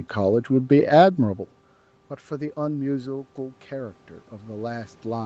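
From 2.27 s to the end there's automatic gain rising. The input dropped by about 18 dB, so the gain control slowly pushes its level back up, and the speech and room noise swell together over those last few seconds, well after the talker's shift around a second in.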